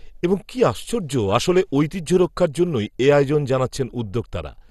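A short speech recording that's dull and gurgly all the way through, with a grainy, watery distortion. Nothing comes through above about 12.2 kHz, and the top bands seem to flicker in and out. That's the signature of MP2 compression, likely at a low bitrate: the coder ran short of bits, shut off its upper sub-bands and coarsely quantised the rest. The damage fits a rate around 64 kbps.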